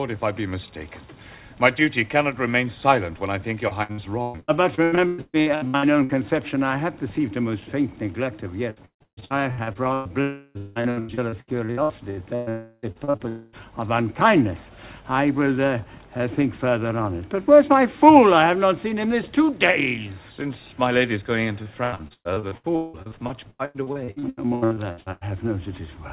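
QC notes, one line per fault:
3.68–6.12 s, 8.70–10.12 s, 10.58–12.49 s, 12.92–13.22 s, 21.63–25.24 s: repeated packet loss (robotic sound). Frequent short holes, up to 180 ms, are each papered over by extending the previous sound, so 42–47% of each stretch is synthetic fill. The result is choppy stutter with pieces missing. Unlike a dropout, the gaps recur rapidly instead of forming one hole.
10.21–10.58 s, 12.49–12.86 s, 13.28–13.56 s: long network dropout. Each is a single continuous gap of about 0.33 s, or 0.24 s for the last, most likely from a network stall. The receiver stretches the last sound into a fading buzz or hiss that ends in at most 20 ms of silence before audio resumes with the content missing. It sounds like one smeared hole rather than a stutter.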